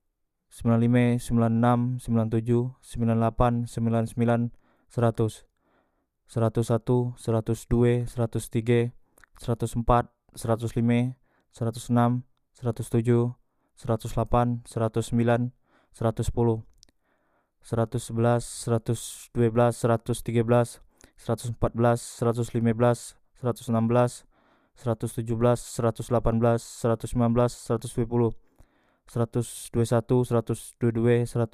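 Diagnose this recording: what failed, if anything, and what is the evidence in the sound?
Nothing failed in this recording, and there is no fault evidence to be heard anywhere in the sound.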